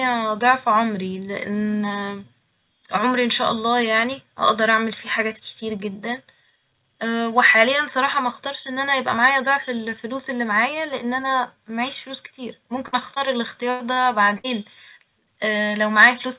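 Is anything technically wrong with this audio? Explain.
Yes. Between 12.88 and 14.46 s the speech drops out repeatedly, from two related faults.

Bursts of packet loss occur at 12.88–12.95 s, 13.70–13.82 s and 14.38–14.46 s. In each, a run of audio failed to arrive in time, so the receiver extended the last sound for roughly 46, 98 and 57 ms while fading it into a held buzz or dying hiss. Playback then resumes about 40, 100 and 60 ms further on. Unlike the shorter losses, these leave an audible jump with speech missing.

Short concealed packet losses occur at 13.15–13.18 s and 13.94–13.98 s. Each time about 20 ms never reached the decoder. The gap was patched with roughly 15 and 24 ms of synthesized continuation, from the pitch of the last sound or from shaped noise, and then crossfaded back. The result is a quick smear or wobble rather than a fade, and at most a consonant can go missing, not a chunk of speech.

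The call path itself has nothing above 4 kHz, which fits G.711 A-law telephony.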